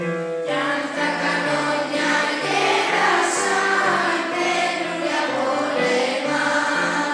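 No technical faults can be heard anywhere in the audio; the signal stays steady and intact throughout.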